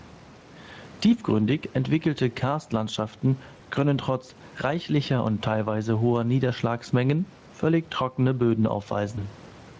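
Throughout the speech the input gain is likely set far too high, with a fast limiter pulling it down on each loud syllable. This is gain pumping: the gain swings by around 10 dB, leaving the speech squashed.

From 3.57 to 3.60 s, just before "können trotz reichlicher und", VoIP packet loss concealed by the speech codec occurs. One 20 ms packet went missing, and the Speex decoder filled it by extrapolating from the preceding sound, which briefly smears into a buzzy tone or a coloured noise that fades.

From 9.15 to 9.25 s another single 20 ms packet is lost. The concealment and the decoder's recovery stretch the damage across roughly 100 ms, with the sound weak or distorted before it settles. Outside these moments the Speex coding does only light damage in the band below 8 kHz.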